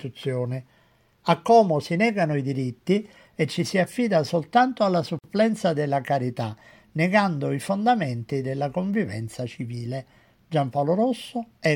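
The audio was assembled from separately encoded pieces joined end to end without trimming, leaving a gap at a join of encoded pieces. The encoder's start-up delay and the padding of the previous piece's last frame both stay in the stream, so at 5.19 s a gap of about 50 ms opens in the continuous sound, ending at 5.24 s. The edges are smeared by the codec, and the sound resumes exactly where it left off, consistent with joins spaced every 10 s.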